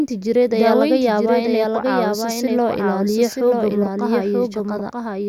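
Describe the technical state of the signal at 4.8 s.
At 4.8 s there's a doubled audio track running right through: the speech repeats about a second late, a few dB quieter and dry, likely from a slower second capture path.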